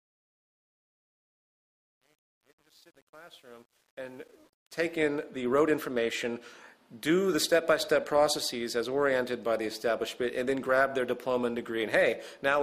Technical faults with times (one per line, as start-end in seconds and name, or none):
0.00-5.07 truncation distortion on a fade